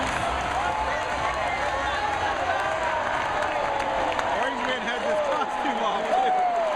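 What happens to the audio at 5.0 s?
Nothing goes wrong at 5.0 s; the audio carries on intact through that moment with no audible fault.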